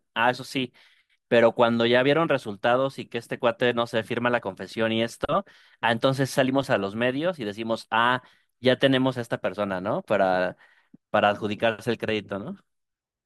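No audible technical faults occur anywhere in the recording.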